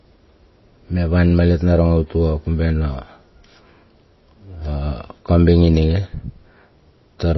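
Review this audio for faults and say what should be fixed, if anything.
Throughout, the speech has its treble cut off and a plainly watery, swirly texture, likely from MP3 compression at a bitrate near 24 kbps. Unlike a plain low-pass filter, faint detail flickers between frames. Encode from the original at a much higher bitrate to prevent it.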